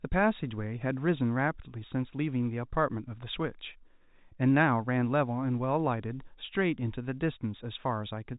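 No faults found in the speech; the G.711 telephone coding behaves as expected, with the band stopping at 4 kHz and its low-level quantisation noise riding under the signal.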